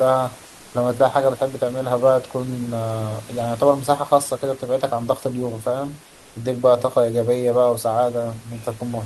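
A speech clip with comfort noise in place of the background in two short gaps, 0.49 to 0.73 s and 6.07 to 6.31 s, each about 240 ms. There the room noise, sitting roughly 27 dB under the speech, gives way to a flat, detail-free hiss at almost the same level, about 1 dB quieter in the first gap. That's likely Opus DTX: the sender pauses in silence and the receiver fills in synthetic noise.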